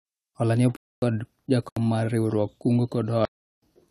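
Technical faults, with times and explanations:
0.76–1.02 s, 1.69–1.77 s and 3.25–3.62 s, block of digital silence: the speech drops straight to zero for 259, 74 and 372 ms, then snaps back. With no fade, each gap is a short hole.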